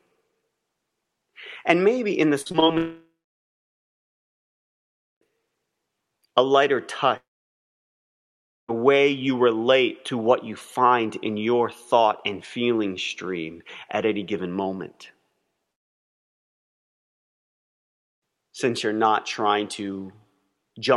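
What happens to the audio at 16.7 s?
At 16.7 s the audio sits inside a long network dropout from 15.72 to 18.23 s. The cause is likely that packets stopped arriving, leaving about 2.5 s of silence. It shows as a flat waveform and a blank spectrogram band before the sound resumes with that stretch missing.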